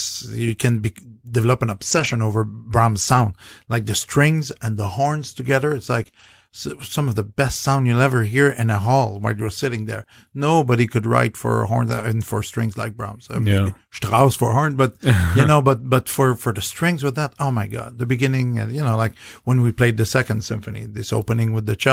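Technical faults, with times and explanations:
1.91–2.13 s, 3.01–3.23 s, 6.07 s, 6.15–6.25 s, 11.89–12.03 s, 15.71–15.81 s and 19.93 s: lost packets rebuilt from error correction. Each time, the next packet carried a low-bitrate copy of the missing audio, 20 to 120 ms of it. The speech doesn't break, but it turns briefly rougher and noisier.
6.03–6.07 s, 6.11–6.15 s and 10.03–10.07 s: short concealed packet loss. About 20 ms never arrived each time, and the decoder extended the preceding sound before blending back, leaving a brief smear or wobble. The first two are interleaved with rebuilt packets around 6.1 s.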